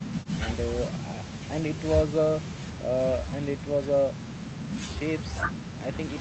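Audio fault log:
No fault is heard in this speech clip.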